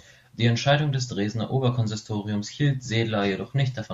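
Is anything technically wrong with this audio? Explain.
No, nothing stood out on listening to this speech clip.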